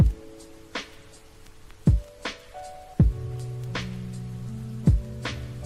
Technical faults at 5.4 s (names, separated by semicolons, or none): none